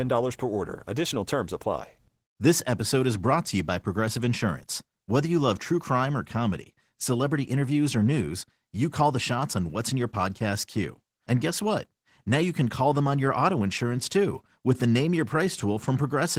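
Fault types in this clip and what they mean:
Opus voice compression: the speech passes through Opus in hybrid mode, with predictive coding below 8 kHz and a transform layer above. The full band survives, but the coarsely coded excitation leaves it plainly hoarse and a little robotic, which fits a rate around 16 kbps.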